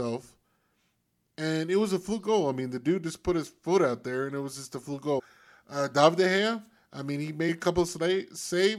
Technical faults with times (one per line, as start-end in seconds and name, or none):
5.18-5.20 damaged data in a compressed stream
7.48 damaged data in a compressed stream